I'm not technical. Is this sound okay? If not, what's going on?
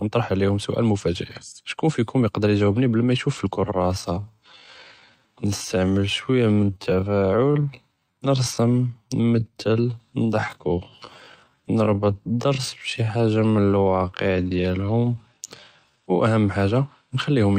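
No. There's a time-stretched section from 3.52 to 16.18 seconds, where the speech suddenly slows to about 61% of its normal pace while the pitch stays the same. The likely cause is software lengthening that stretch of audio to fill a set amount of time, repeating tiny slices of sound instead of slowing it like a tape. That repetition makes this part sound dragged out.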